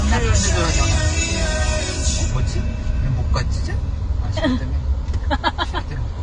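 From start to end, nothing sounds above about 10.2 kHz, and two kinds of artefact are heard together: smeared, swirling treble and a synthetic sheen on the top band. This is likely transcoding between lossy codecs, consistent with a low-bitrate AAC encode re-encoded as HE-AAC. A single codec would leave only one artefact character.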